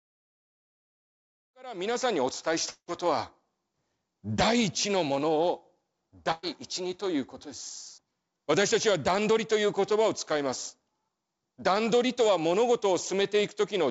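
Speech that fades in smoothly from around a second and a half to 2.17 s, carried over a call path whose spectrogram shows nothing above 8 kHz, as G.722 would give. From 2.70 to 2.90 s there is what sounds like a long network dropout, likely a stall in arriving audio. The receiver stretches the last sound into a fading buzz or hiss for about 176 ms, with roughly 60 ms of near-silence, and about 180 ms of speech never returns. On a spectrogram this looks like a smeared, repeating pattern that dims into an empty column. The waveform shows a decaying envelope before the resumed speech. A burst of packet loss follows from 6.32 to 6.45 s. About 120 ms of audio is missing, and concealment fills some 113 ms with a held, softening sound that never drops to silence. The spectrogram shows a flat, stretched band where the speech detail should be. In the waveform, the cycles repeat and shrink in amplitude, then jump to later material.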